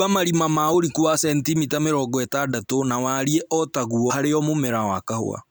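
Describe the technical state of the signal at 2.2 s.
At 2.2 s the speech signal is intact, with no audible technical fault at that point.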